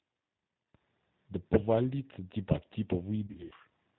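Speech runs through the G.729 codec end to end, audibly rough and synthetic with nothing above 4 kHz, unlike plain low-pass filtering, which stays smooth. At 0.75 s a sudden gain jump lifts voice and background noise together by about 11 dB and holds to the end, likely a gain setting applied without a ramp rather than the speaker getting louder. From 3.27 to 3.54 s, VoIP packet loss concealed by the speech codec removes about 160 ms in gaps spread over 240 ms, the longest 80 ms, which fits eight lost 20 ms packets. Each gap becomes a fading smear of buzzy tone or coloured noise instead of silence or a click, and the voice stays weak afterward.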